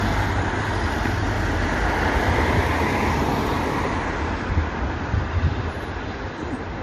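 Throughout, nothing sounds above 13.1 kHz, and two kinds of coding smear blur together. This points to transcoding between lossy codecs, likely low-rate MP3 then Vorbis.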